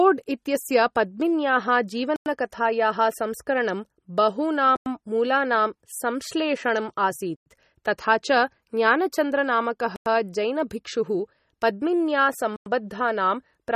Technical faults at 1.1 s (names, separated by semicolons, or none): MP3 compression